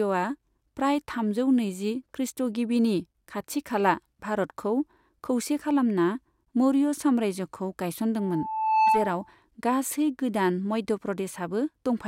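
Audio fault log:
8.18–9.35 s, loudspeaker feedback squeal: a single tone near 877 Hz rises out of the speech, swelling over roughly the first three quarters of a second until it sits a few decibels above the voice, then stops at 9.35 s. The microphone is picking up the loudspeaker it drives, and at that one frequency the round trip gains more than it loses, so the tone feeds itself and keeps growing until the amplifier limits it or the loop is broken.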